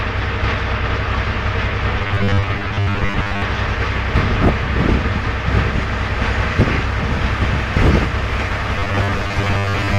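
From 1.99 to 3.42 s, and again from 8.76 to 9.98 s, the sound turns into a rigid metallic buzz at 100 Hz. This is robotic sound from repeated short buffers. It is likely caused by the last 10 ms being looped while real audio is skipped: most of it in the first stretch, about half in the second.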